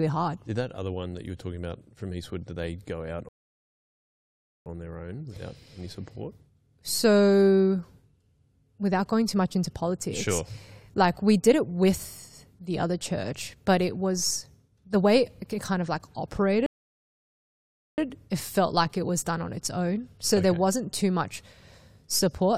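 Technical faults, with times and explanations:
3.29–4.66 s and 16.66–17.98 s, rebuffering stall: the speech stops dead after "did they go out" for 1.37 s, and later for 1.32 s before "it felt like it". Playback exhausted its downloaded audio and waited, so it resumes seamlessly, adding time without losing anything.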